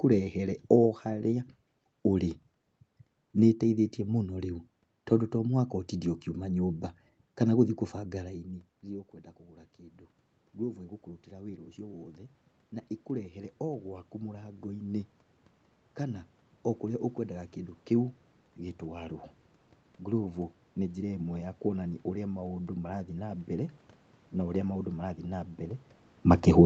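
Speech, with automatic gain rising twice. Around 8 s the talker moves back and the level at the microphone falls by about 18 dB. From 7.93 to 17.54 s the gain climbs by about 10 dB, and from 18.8 to 25.56 s by about 5 dB more. The room noise swells along with the voice, which marks this as gain control rather than the talker approaching.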